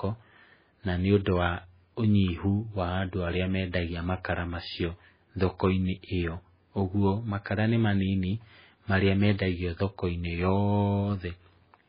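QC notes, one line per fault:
Throughout, MP3 compression: the speech has nothing above 5 kHz and a heavy watery, swirling texture with smeared onsets, likely from MP3 encoding at a starved rate fitting about 16 kbps. Unlike a simple low-pass filter, weak components flicker on and off between frames.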